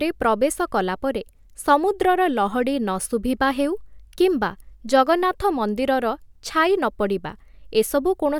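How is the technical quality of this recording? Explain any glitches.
The technical quality of this recording is sound, with no glitches to explain.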